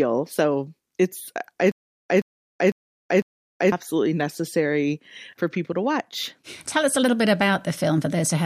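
Speech, with a stutter with silent gaps from 1.72 to 3.72 s, just before "necessary for people to". The same 123 ms burst plays four times, each followed by 379 ms of digital silence, repeating every 502 ms. The likely cause is a stalled stream that replayed its last fragment at each retry, so the audio for that span is lost. A spectrogram shows four identical slivers separated by blank columns, and the waveform flatlines between the bursts.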